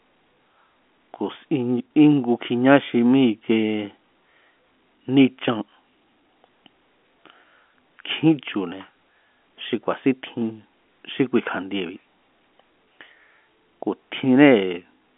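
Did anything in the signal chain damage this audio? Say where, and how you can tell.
No, nothing in the chain damaged this speech.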